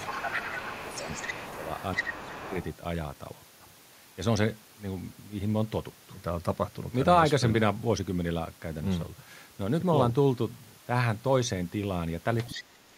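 From 0 to 2.65 s the echo canceller likely failed to remove all of the loudspeaker signal from the microphone, so the other side's voice leaks through, about 10 dB below the talker. In the same stretch, speech is suppressed in double talk. The canceller, likely unable to separate the talker from the echo, turns the voice down by as much as about 10 dB from 0 to 1.06 s, 1.23 to 1.44 s and 1.96 to 2.51 s, leaving dips and gaps. From 12.46 to 12.62 s a short scrap of the other side leaks through again, about 15 dB down. From 12.5 s to the end, the talker is pushed down by about 25 dB.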